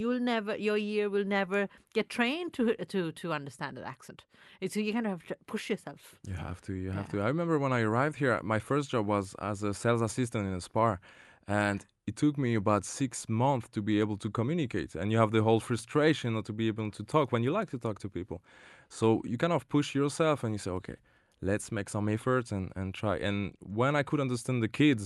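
Nothing in this speech recording points to a technical fault. It has passed through a WebRTC call path, with the audio band topping out around 12 kHz, which fits Opus at a moderate bitrate.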